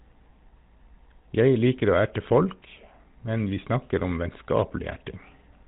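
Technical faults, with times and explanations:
Throughout: GSM full-rate codec. Speech is cut off above 4 kHz and carries a plainly audible buzzy, gravelly roughness from pulse-driven vocal-tract coding, consistent with the 13 kbps mode.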